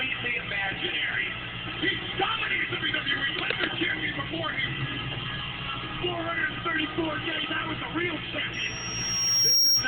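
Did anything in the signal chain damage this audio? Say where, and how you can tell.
Yes. From 8.53 s to the end at 9.87 s there is loudspeaker feedback squeal, arising in the analogue acoustic loop where a microphone hears the loudspeaker it drives. A single tone at 5.6 kHz swells over roughly a second until it sits about 10 dB above the rest of the sound. Loop gain at that frequency has passed unity, so it keeps feeding itself. On a spectrogram it is one bright horizontal line brightening from left to right, and the waveform envelope grows steadily.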